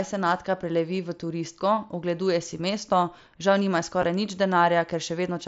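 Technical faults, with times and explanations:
4.02 s, concealed Bluetooth headset packet loss: 7.5 ms of audio failed to arrive from the headset, which fits one dropped packet, and the phone patched the gap with a matching copy of the preceding waveform, so it is nearly hidden.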